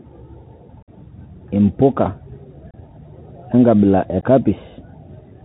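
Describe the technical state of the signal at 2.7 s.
At 2.71 to 2.74 s the speech drops out for about 30 ms: unconcealed Bluetooth headset packet loss. A few consecutive voice packets between headset and phone never arrived, and nothing was synthesised to cover them, so the gap is filled with silence or an idle pattern. The hole has hard edges that can click at entry and exit, and the speech resumes briefly quieter as the link recovers.

The same moment carries the Bluetooth CVSD headset codec that runs through the whole clip, and its damage is plainly audible. CVSD sends one bit per sample, up or down, with an adaptive step, which fits a 64 kbit/s headset link. The band stops at 4 kHz, loud high-frequency energy outruns the step and distorts, sibilants come out scratchy, and a granular hiss sits beneath the speech.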